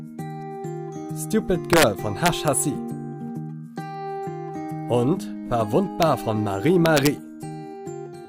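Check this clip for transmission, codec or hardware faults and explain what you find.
Integer overflow is present in four places: from 1.73 to 1.83 s, 2.26 to 2.48 s, at 6.03 s, and from 6.86 to 7.07 s. Loud peaks burst into violent cracks, far harsher than clipping. The level ran up to about 3 dB past the integer limit, wrapping each peak to the opposite sign instead of being held there.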